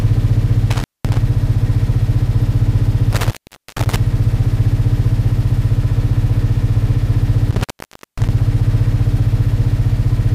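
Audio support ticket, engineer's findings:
Intermittent contact, dropouts at 0.71–1.18 s, 3.13–3.96 s, 7.51–8.29 s (open roughly 0.21, 0.45, 0.54 s); loose plug/cable. Waveform: flat gaps edged by crackle spikes; spectrogram: broadband clicks, faint hiss floor between.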